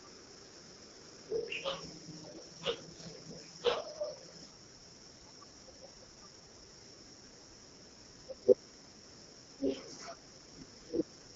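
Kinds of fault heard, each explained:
AMR wideband (HD Voice) codec: the speech comes out rough and raspy all the way through, which fits one of the lowest rates, around 8.85 kbit/s, where the vocal-tract model is starved of bits. Nothing reaches past about 7.6 kHz.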